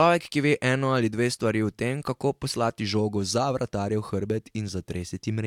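No technical faults can be heard anywhere in this speech recording; the signal stays intact and continuous throughout.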